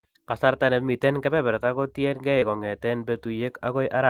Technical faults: short concealed packet loss

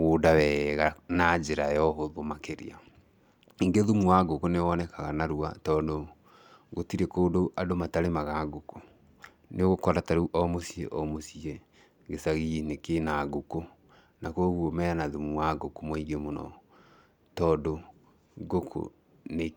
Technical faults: none

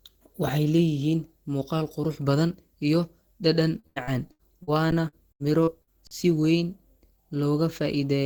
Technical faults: repeated packet loss (robotic sound); underrun with held sample

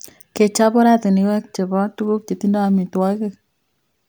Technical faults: none

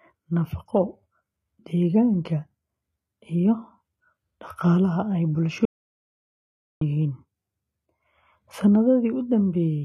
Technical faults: HE-AAC compression; audio dropout to silence

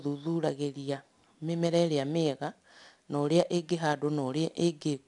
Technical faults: 4-bit ADPCM compression

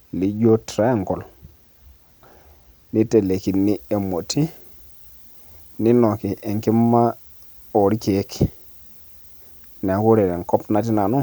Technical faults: pre-emphasis left on

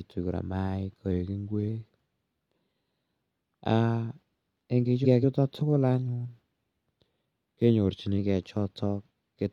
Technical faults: drift correction step; frames out of order

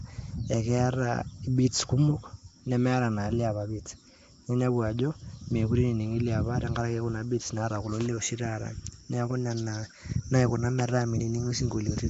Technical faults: Nellymoser compression

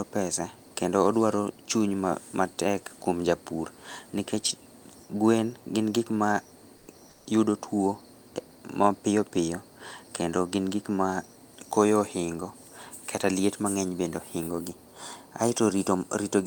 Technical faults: comfort noise in place of the background

